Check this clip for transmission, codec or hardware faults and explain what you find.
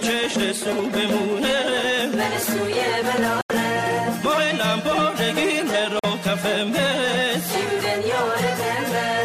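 Two dropouts from corrupt frame muting occur, at 3.41 to 3.51 s and 5.99 to 6.05 s. Damaged compressed frames were rejected by the decoder and the player filled the gap with silence. The lengths suggest a few whole frames were lost in each case. Each dropout starts and stops abruptly, and timing after it stays intact. On a waveform these are flat near-silent stretches with sharp edges. A spectrogram shows full-height blank vertical bands about 0.10 s and 0.05 s wide.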